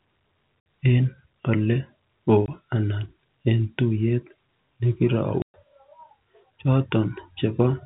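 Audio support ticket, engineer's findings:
Packet loss filled with silence: hard dropouts in the speech at 0.60–0.66 s (60 ms), 2.46–2.48 s (20 ms) and 5.42–5.54 s (120 ms). Every gap is a whole multiple of 20 ms, which fits 20 ms packets lost in transport. The receiver has no concealment and plays silence in their place. Band-limited G.711 telephone coding audible throughout, nothing above 4 kHz.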